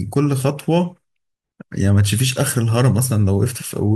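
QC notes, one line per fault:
No faults found on this speech clip.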